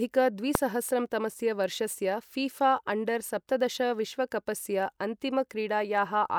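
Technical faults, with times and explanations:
0.55 s, damaged data in a compressed stream: a tiny, sharp blip in the speech, a click-like chirp lasting only about 4 ms. Part of the compressed stream at this point has been corrupted, so the decoder cannot read the frame there properly. It produces a fragment of garbled output, loses synchronisation, and then finds the next valid frame header and resumes normal decoding, which is why the disturbance is so short and abrupt.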